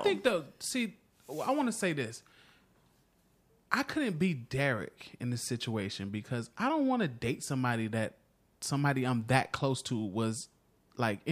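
No faults are audible anywhere in the recording; there is nothing to log.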